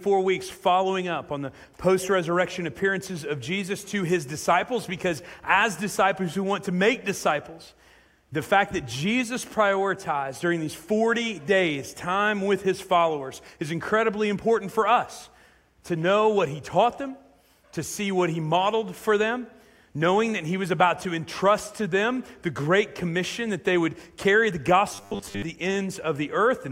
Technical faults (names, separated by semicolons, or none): robotic sound from repeated short buffers